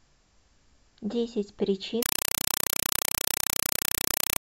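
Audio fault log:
2.03–4.40 s, compressed stream played as audio: loud chattering static replaces the speech, 4 ms noise bursts 31.25 times a second, consistent with an undecoded 192 kbps AC-3 stream.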